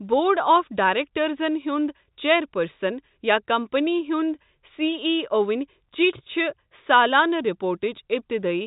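Speech carried over G.711 telephone coding, with nothing above 3.8 kHz, and nothing technically wrong with it.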